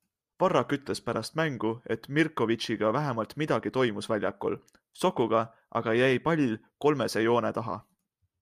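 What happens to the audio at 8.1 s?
Nothing goes wrong at 8.1 s; the speech continues intact through that moment, with no dropout, click or distortion.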